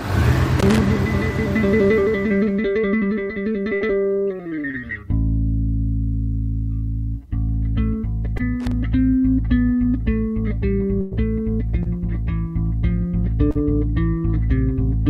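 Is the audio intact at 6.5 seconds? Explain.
Yes, the audio is intact at 6.5 seconds, with no dropout, glitch or other technical fault at that point.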